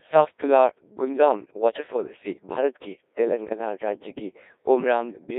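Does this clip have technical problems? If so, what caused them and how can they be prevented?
Yes. Throughout, the speech sounds robotic and buzzy, thin and confined to roughly 300 Hz to 3.7 kHz, with a synthetic, hollow quality. That is heavy Codec 2 vocoder damage. At 1.6 kbit/s the codec transmits only pitch, voicing, energy and a coarse spectral envelope, and the decoder rebuilds the voice from sine waves, so the original waveform never arrives. Using a higher-rate or waveform-preserving codec when the channel allows would prevent it.

From 3.48 to 3.58 s the voice abruptly warbles and jumps in pitch, loudness and tone colour, briefly turning into robotic gibberish. These are bit errors on digital voice radio. Around one bit in ten was flipped, and the damage spans what sounds like about two vocoder frames. At such a low rate every bit steers a whole frame's pitch, level, voicing or spectrum. 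Stronger signal margin or better forward error correction would prevent it.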